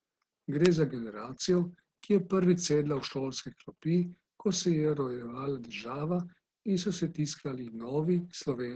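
Opus voice compression affects the whole speech clip. Nothing is heard above 9 kHz. The linear-prediction coder has few bits for the excitation, so the speech sounds muffled, hoarse and faintly robotic. The heavy damage points to a bitrate near 10 kbps.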